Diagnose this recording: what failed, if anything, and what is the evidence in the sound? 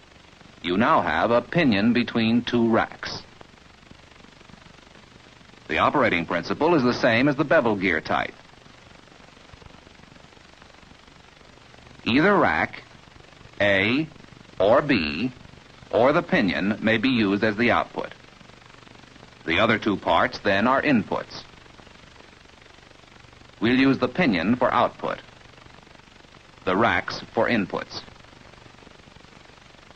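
Nothing in this recording points to a failure at any stage, from the analogue wiring and converter through to storage and playback, and the sound gives no audible sign of a problem anywhere along the chain.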